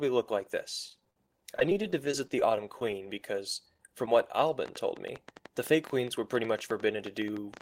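Just after "look like", from 0.89 to 2.95 s, repeated packet loss gives a robotic sound. Over twenty short holes, the longest 29 ms, are patched by stretching the previous sound. About 13% of the stretch is filled this way. The speech turns choppy.

From 3.50 to 4.08 s come scattered short gaps. A handful of brief losses, each around 10 ms, are covered by continuing the last sound. Only a small share of this stretch is patched. The speech stays clear but hiccups and ticks briefly.

From 4.66 s to the end runs a train of clicks. Sharp, similar pulses arrive about 8.1 times per second at an uneven pace. They peak roughly 5 dB above the speech. The cause is likely electrical interference or a struggling interface. The ticking continues through pauses.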